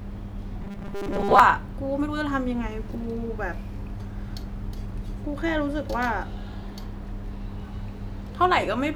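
Speech clip, and early on, from about 0.62 to 1.40 s, it flips into that robotic sound from repeated short buffers: a stiff, metallic buzz that still roughly tracks the speech. The buzz sits at a fixed 200 Hz, which fits a chunk of about 5 ms being looped over and over. Most of the audio in that stretch is repeats rather than new material. The likely cause is audio arriving too slowly, so the playback side keeps recycling its last tiny buffer to cover the gaps.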